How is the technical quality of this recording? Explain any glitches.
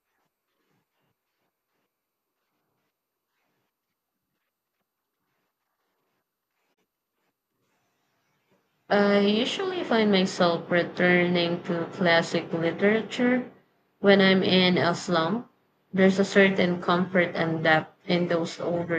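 One glitch stands out in this speech recording: a digital broadcast dropout at about 6.73 s, ending by 6.79 s. The receiver failed to decode a frame, most likely one that didn't pass its checksum, and muted output rather than play corrupted data. That appears as a quick fade of about 20 ms into a brief silence, with roughly 24 ms of audio missing, which fits a single lost frame. The speech then resumes mid-flow, and the gap's content is gone.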